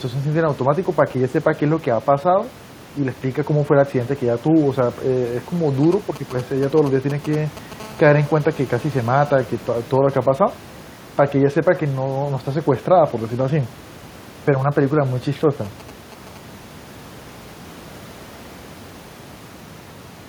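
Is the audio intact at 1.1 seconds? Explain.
Yes, the speech at 1.1 seconds is intact, with no dropout, click, distortion or other audible fault at that moment.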